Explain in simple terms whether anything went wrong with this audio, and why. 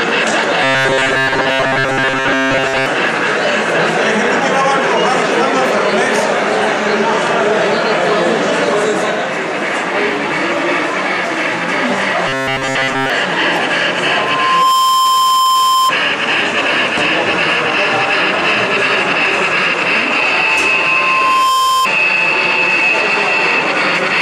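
Two separate problems show up. The first is most likely a delivery problem: fresh audio wasn't arriving fast enough, so the playback software kept filling the gaps by replaying its last tiny slice, about 7.5 ms long, over and over while much of the real sound was skipped. That constant looping stamps a steady buzz at 133 Hz onto everything. This robotic sound from repeated short buffers turns the audio harsh and metallic from 0.63 to 2.86 s and again from 12.28 to 13.10 s.

The second is a loudspeaker feedback squeal. A microphone was picking up the very speaker it was feeding, so one pitch, 1 kHz, kept circling the loop and growing louder on its own. From 14.03 to 15.94 s the tone swells over roughly 0.7 s until it rises above the rest of the sound. From 20.47 to 21.88 s it builds more slowly, over about a second, and ends up roughly as loud as everything else.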